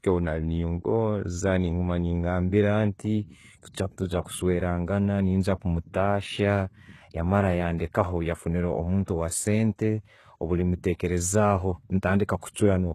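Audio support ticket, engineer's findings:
Speech, full clip: gritty, lispy sibilants, metallic treble; harmonics misaligned above crossover, nothing above 12.3 kHz. Likely HE-AAC compression, heavy damage; spectral band replication rebuilding treble from copied lower bands, fits a low bitrate around 16 kbps.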